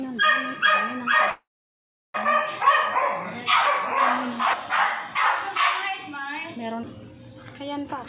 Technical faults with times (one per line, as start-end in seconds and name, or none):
1.30-2.16 call audio freeze
7.82-8.08 jitter buffer speed-up